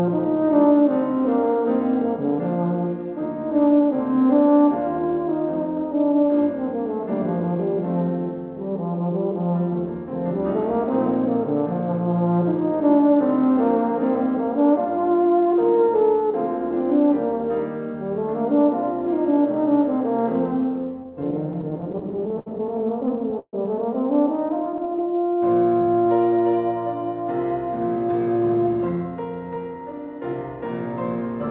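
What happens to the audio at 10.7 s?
At 10.7 s the audio is intact, carried through the call path with its usual telephone-band sound and nothing above 4 kHz.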